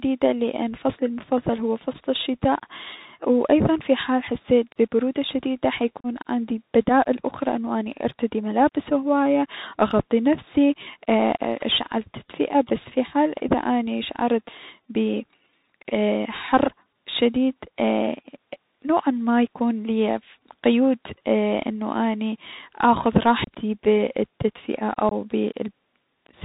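Throughout, the speech passes through a Bluetooth CVSD headset codec at what sounds like a 64 kbps link, cutting everything above 4 kHz and leaving scratchy sibilants over granular hiss. Unconcealed Bluetooth headset packet loss drops a few packets at 6.00 s, 23.44 s and 25.09 s. Each gap is 37.5, 30 and 22.5 ms long, and each leaves an abrupt hole before the speech resumes briefly quieter.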